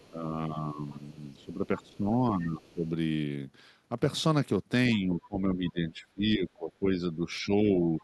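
A speech recording with two echo-control faults. The other side's voice leaking through can be heard faintly, about 30 to 35 dB down, at 0.00–0.09, 0.90–1.13, 1.38–1.45, 1.90–1.97 and 2.66–2.73 s, likely residual loudspeaker echo. Speech is suppressed in double talk at 0.11–0.83, 1.36–2.85 and 4.95–7.92 s, dipping by roughly 10, 20 and 15 dB. The echo canceller likely turned down both talkers together.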